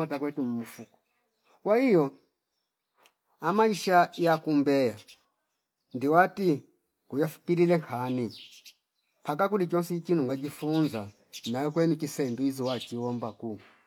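Nothing in this speech recording stands out as a technical problem, so there's nothing here to flag.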